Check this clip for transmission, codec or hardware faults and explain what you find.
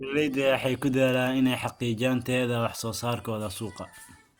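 No faults found in this recording.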